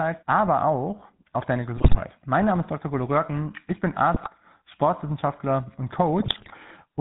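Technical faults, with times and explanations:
Throughout, GSM full-rate codec: the speech has that gravelly, buzzy edge you get from the old 13 kbps GSM coder, and the damage is plainly audible. It rebuilds the voice from a vocal-tract filter fed with a sparse, regularly spaced pulse train, keeping only a third of the excitation samples, so the fine detail between pulses is lost and comes back as roughness. Nothing above 4 kHz survives, so the top end sounds dull and boxy.
1.76–2.01 s, 4.14–4.28 s and 6.20–6.55 s, GSM bit errors: three bursts where the decoder is fed corrupted bits, heard right after "aber auch auf deine", right after "ich bin", and then near the end. When flipped bits land in the filter, pitch or gain parameters, the decoder rebuilds the wrong spectrum or the wrong level for that frame, so the voice squawks, pops and gargles for a moment. The last burst runs longest and is the most mangled, which fits an error rate around 7 percent, against roughly 5.5 and 3.5 percent in the first two.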